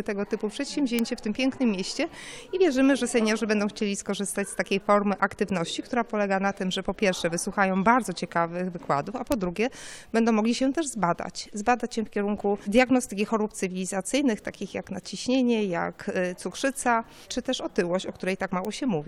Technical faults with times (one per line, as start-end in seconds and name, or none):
0.99 bit error spike
9.32 bit error spike
15.35 bit error spike
18.65 bit error spike